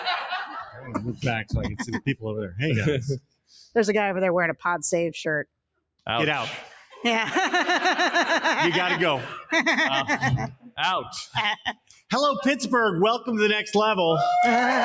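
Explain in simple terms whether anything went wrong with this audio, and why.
Yes, something went wrong: a noise suppressor meant for speech was left running on this music or other sound. It mistakes steady tones, ambience and reverb for background noise and keeps turning them down, so the level gently pumps and held parts thin out while sharp attacks get through.

At a handful of moments the sound was cut by the noise suppressor much harder, and fading or sustained parts briefly sank or had their tails chopped short: around 0.64 to 0.92 s, 3.2 to 3.75 s, 10.52 to 10.79 s, 11.04 to 11.36 s and 11.56 to 12.12 s. The dips at 3.2, 10.52 and 11.56 s are the deepest.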